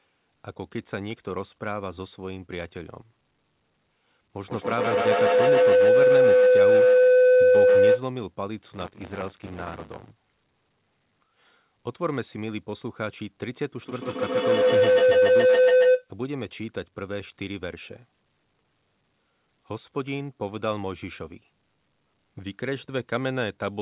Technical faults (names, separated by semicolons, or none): feedback howl; buffer tearing